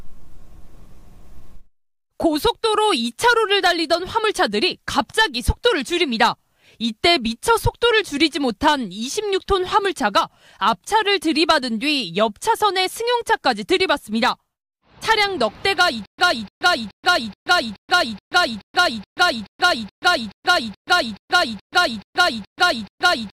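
From 16.06 s to the end, a stutter with silent gaps takes over. One 298 ms fragment repeats 17 times, each followed by 129 ms of digital silence, on a steady 426 ms cycle. A stalled stream likely kept replaying its last buffer, losing the audio in between.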